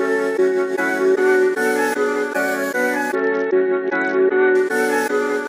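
From 3.15 to 4.55 s the audio suffers a Bluetooth SBC bit pool drop: the treble suddenly dulls and a gritty, grainy noise rides on what remains, then clears. The sound points to the encoder cutting its bit pool from around 28 to about 7, near 66 kbps, starving the upper sub-bands and coarsely quantising the rest. On a spectrogram the top bands go dark abruptly for that stretch, with speckled noise filling the lower bands.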